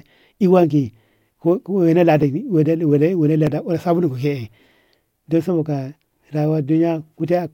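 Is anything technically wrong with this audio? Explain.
Yes. From 0.99 to 7.2 s, clock drift buffer slips likely occur: mismatched device clocks force a few dozen samples to be dropped or repeated about every 1.24 s, each heard as a click.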